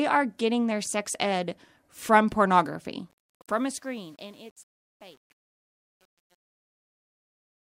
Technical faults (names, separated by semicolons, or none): truncation distortion on a fade